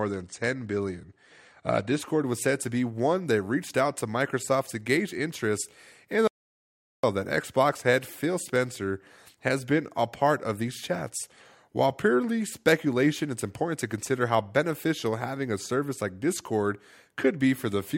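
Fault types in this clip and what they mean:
Adaptive stream starting at a low bitrate: the speech opens thin, with nothing above 10 kHz, then brightens abruptly at 2.0 s with no gap, unlike steady codec dullness.
Audio dropout to silence: from 6.28 to 7.03 s, about 760 ms, the speech cuts to silence with no room tone, likely a lost input rather than a pause.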